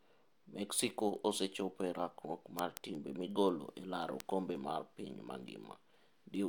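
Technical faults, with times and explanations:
0.26 to 6.35 s, word clock ticks: sharp ticks of uneven strength recur at a steady rate of about one every fifth of a second, around forty in all. The receiving device is running on its own clock rather than locking to the digital link, off by roughly 100 ppm, so a single sample is dropped or repeated each time the clocks slip. The strict regular spacing and the absence of any audible gap set this apart from dropouts or buffer underruns.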